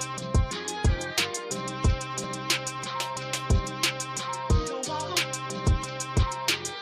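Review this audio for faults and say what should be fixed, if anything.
There are two small skips, at 2.24 s and 6.22 s, from overlap between stream segments. The timestamps on neighbouring segments claim a little shared time, so the player trims that stretch even though nothing was actually doubled. A few milliseconds of real audio disappear and the waveform jumps, which you hear as a tick or tiny skip. The two are about 4 s apart, which fits segments roughly 4 s long.

To prevent it, fix the segmenter so each segment's start timestamp lines up exactly with the previous one's end.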